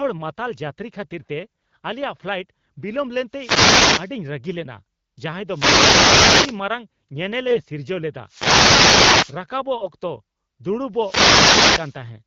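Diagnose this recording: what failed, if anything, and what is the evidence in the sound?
The analogue radio link to the microphone failed at four points, each a wireless microphone noise hit: 3.29 to 4.16 s, 5.45 to 6.63 s, 8.26 to 9.41 s just after "ᱥᱤᱨᱡᱟᱹᱣ ᱞᱮᱫᱟ", and 10.91 to 12.03 s. Each is a swish of static as the FM carrier fades under cancelling reflections and receiver noise rises over the speech.

The network stage shows AMR bit errors at 3.68 to 3.76 s, 7.48 to 7.60 s just before "ᱥᱤᱨᱡᱟᱹᱣ ᱞᱮᱫᱟ", 9.78 to 9.87 s, and 11.45 to 11.62 s. Flipped low-priority bits misplace excitation pulses, so the speech turns briefly hoarse and gargly, worst at 7.5 s, where errors ran near one bit in ten. The AMR-WB codec at 12.65 kbit/s is heard only as light coding texture.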